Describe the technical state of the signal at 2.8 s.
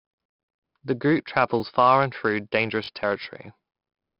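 A repeated buffer sits at 2.84 to 2.88 s: a 20 ms piece of speech plays twice more with hard joins, giving a brief stutter or buzz. 4-bit ADPCM compression runs throughout. Coarse 4-bit prediction steps leave heavy gritty hiss tracking loud sounds, and nothing above 5.3 kHz, which fits a rate near 44 kbps.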